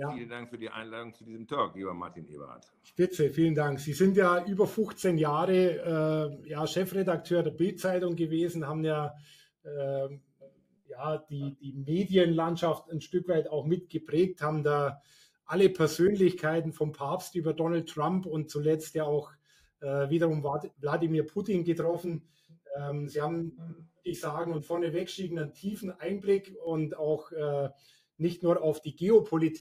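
From 21.82 to 26.67 s the sound turns rough and slightly doubled. This is channel delay (comb filtering): one channel lags the other by roughly 20 ms, and summing them cancels evenly spaced frequencies, with the first notch near 30 Hz.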